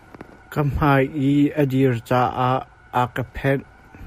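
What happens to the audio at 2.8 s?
Nothing goes wrong at 2.8 s; the speech carries on intact through that moment.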